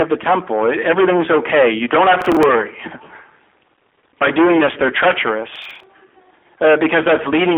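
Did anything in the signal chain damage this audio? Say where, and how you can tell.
Yes. Hard clipping runs through the whole speech clip. Peaks are driven about 24 dB past full scale at the converter or format stage. Roughly a sixth of samples flatten into harsh fuzz.

Processor overload crackle hits at the driver and buffer stage, from 2.21 to 2.43 s after "okay you don't have", and from 5.56 to 5.84 s. Each time, about seven short buffers, roughly 10 ms each, missed deadlines and replayed stale audio, producing gritty tearing.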